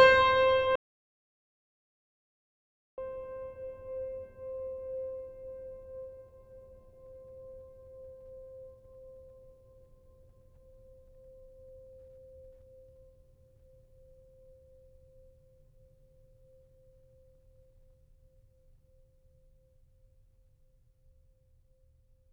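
Music, with an audio dropout to silence from 0.76 s to 2.98 s. The signal cuts off abruptly and returns mid-flow about 2.22 s later. The gap is silent, with no room tone or noise floor underneath. That points to the input being lost while the recorder kept writing empty samples, most likely through a disconnected device, a failed link or a stray mute. Whatever was playing during that stretch is not recoverable from the file.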